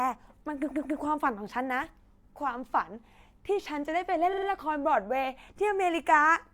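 Speech with repeated frames: from 0.70 to 0.98 s a 139 ms block of sound plays two extra times, and from 4.32 to 4.46 s a 46 ms block plays three extra times. Each is heard as a stutter. The waveform and spectrogram show identical copied blocks side by side.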